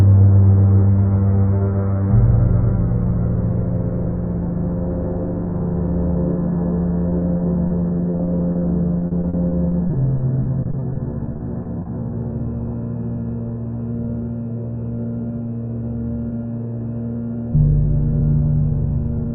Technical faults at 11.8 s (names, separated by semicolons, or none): repeated packet loss (robotic sound)